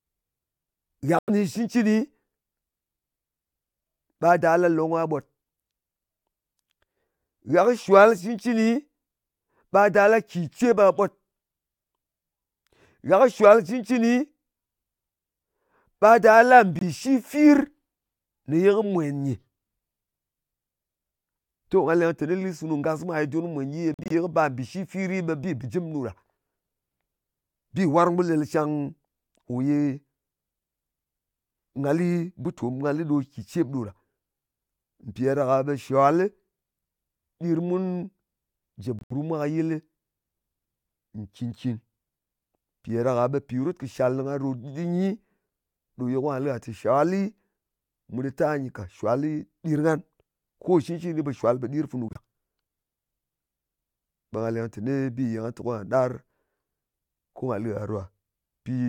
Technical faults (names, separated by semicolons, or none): corrupt frame muted